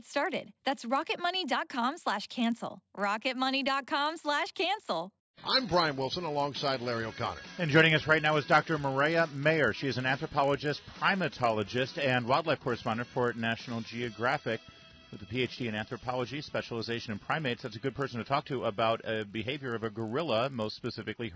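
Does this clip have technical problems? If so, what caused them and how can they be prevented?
Yes. The resampler restarted on every block throughout the clip, a 50 Hz buzz riding the audio: each 20 ms block was converted alone, leaving edge errors, which fits a 44.1 kHz to 16 kHz conversion. Run a single continuous resampler that carries its filter state across block boundaries instead of reinitialising it per block.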